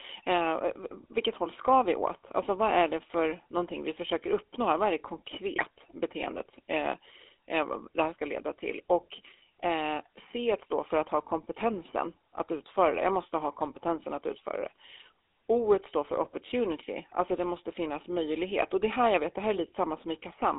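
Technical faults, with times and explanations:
Throughout, GSM full-rate codec: the audio has the gritty, buzzy roughness of first-generation GSM coding, and the damage is plainly audible. The codec rebuilds the sound from a vocal-tract filter excited by a sparse, regular pulse train, with only a third of the excitation samples kept, so fine detail is replaced by a mechanical rasp. The band is held to roughly 300 Hz to 3.6 kHz, which removes the low body and all the air above it, at a rate that fits 13 kbps.
5.56 to 5.65 s, GSM bit errors: a short burst of squawking and gargled distortion breaks through for about 90 ms. Corrupted bits reached the decoder, at a density that points to an error rate near 1.2 percent, scrambling the filter, pitch and gain parameters across a few consecutive 20 ms frames. The wrong values bend the spectrum and throw the level off, so those frames come out as harsh, garbled noise.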